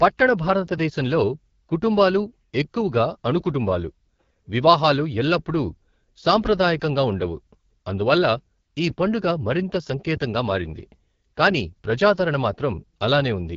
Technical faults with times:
0.00-13.56 AMR wideband (HD Voice) codec

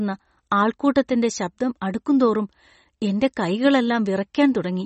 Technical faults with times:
0.00-4.85 MP3 compression

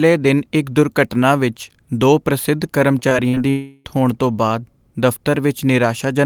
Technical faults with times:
2.99-3.38 repeated packet loss (robotic sound)
3.50-3.87 long network dropout

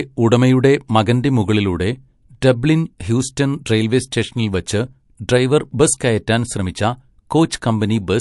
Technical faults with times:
0.00-8.21 MP3 compression

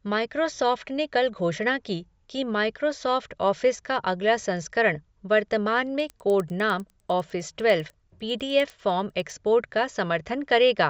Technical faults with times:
6.00-9.30 resampler restarted on every block

